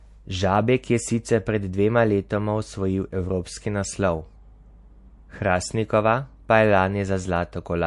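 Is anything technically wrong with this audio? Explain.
Yes. Throughout the speech there is plainly audible damage, likely from MP3 compression. Nothing sounds above 11.3 kHz, which fits a low bitrate around 48 kbps. Starved of bits, the encoder cuts the treble and drops weak frequency lines frame by frame, giving a watery, swirly texture and metallic chirps on s sounds.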